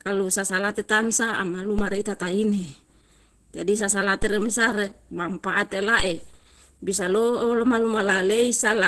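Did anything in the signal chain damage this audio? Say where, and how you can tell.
Yes. At the codec stage, the speech sounds muffled and hoarse throughout, and a spectrogram is empty above 12.1 kHz. This likely comes from Opus compression in hybrid mode, heavily starved at roughly 12 kbps.

At the converter stage, there are DC steps at 1.79 s, just after "sasalate tamsa ama", and at 4.22 s. Each is a low thump where the waveform's zero line jumps and then drifts back within a fraction of a second.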